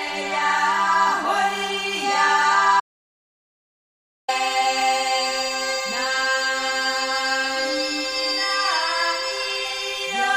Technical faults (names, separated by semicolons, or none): audio dropout to silence